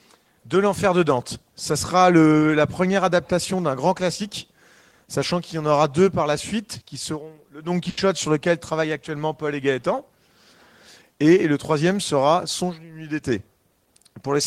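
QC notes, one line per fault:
7.89 to 7.99 s, burst of packet loss: several consecutive packets failed to arrive in time, so the receiver filled about 80 ms by extending the last sound it had and fading it down, heard as a smeared, decaying hold rather than silence. When the audio returns, about 80 ms of material has been skipped. A plain dropout would fall to silence instead, and a single lost packet would leave a much shorter blip than this.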